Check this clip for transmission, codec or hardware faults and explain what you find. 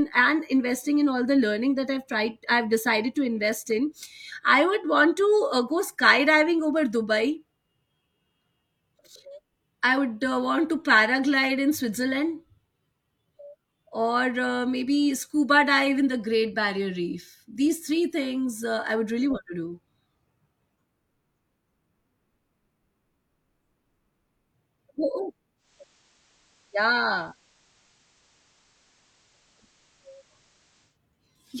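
One fault is present. From 25.56 s to 30.99 s a faint hiss rises, sitting well below the speech at roughly 35 dB down, with the level dropping by about 1 dB. This is digital radio blending to analogue: the receiver lost its digital stream and cross-faded over about 0.18 s to the station's FM broadcast, whose noise floor you hear, before returning to digital.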